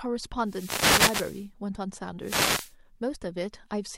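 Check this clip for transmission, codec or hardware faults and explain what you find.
Two wireless microphone noise hits break into the speech: a burst of static from 0.42 to 1.50 s, and a shorter one from 2.20 to 2.75 s. Each is a swish of hiss that rises over the speech. The radio link of an analogue FM microphone has faded as reflected signals cancelled at the receiver. With the carrier weakened, the receiver's own noise floor comes up through the demodulated audio until the signal recovers.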